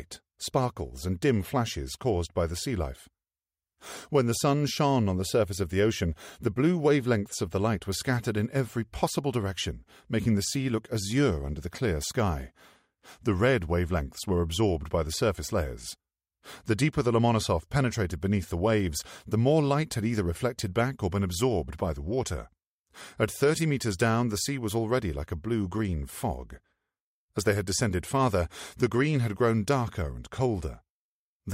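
Nothing stood out on listening; no technical faults could be heard anywhere in the audio.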